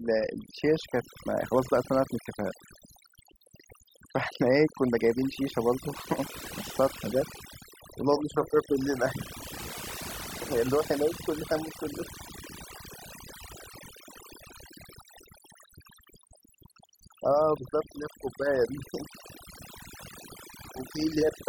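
From start to finish the speech carries overdone noise removal. A noise reduction stage set far too aggressively has pulled down every frequency band that sits close to its noise estimate, so the gaps between phrases drop to near silence dotted with twinkling specks, and quieter parts of the voice are stripped away. Unlike a noise gate, which mutes the whole signal at once, this removes individual bands and leaves the scattered specks behind.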